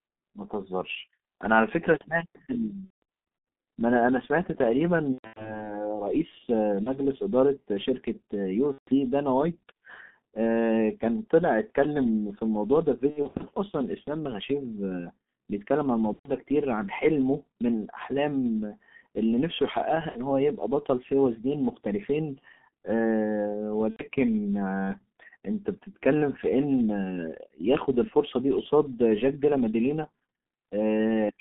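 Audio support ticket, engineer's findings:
G.723.1 codec, whole call. Muffled, hoarse sound, smeared consonants, band roughly 200 Hz to 3.6 kHz. Heavy low-bitrate coding, around 6.3 kbit/s, slow model updates.

VoIP packet loss concealed by the speech codec at 2.85–3.03, 5.13–5.66, 6.83–7.00, 8.72–8.96, 13.10–13.45, 16.13–16.32, 20.09–20.22 and 23.90–24.02 s. Buzzy, fading extrapolation. Gaps fit 30 ms frames. Recovery lags afterwards.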